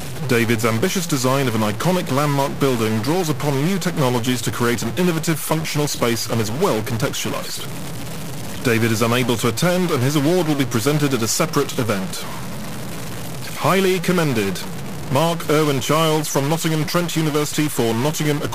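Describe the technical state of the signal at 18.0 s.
At 18.0 s the stuck bit distortion persists, as across the whole clip. A data bit is likely held fixed, adding harsh buzzy error about -25 dBFS, filling quiet passages with noise.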